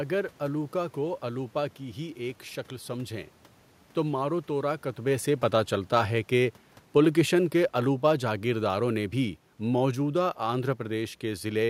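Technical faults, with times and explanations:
3.97 to 10.68 s, automatic gain falling: the automatic gain control judged the input too loud, or its background noise too strong, and pulled its gain down gradually over nearly seven seconds, by about 7 dB in total. Because the gain is applied to everything the microphone picks up, the room noise beneath the speech sinks along with it. The talker's change of distance around 4.5 s is separate, a real movement at the microphone rather than a gain fault.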